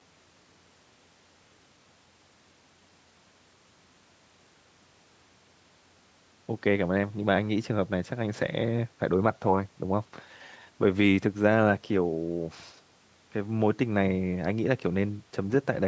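No technical faults can be heard anywhere in the speech. The call microphone processing is working normally, trimming the lowest bass and leaving nothing above 8 kHz.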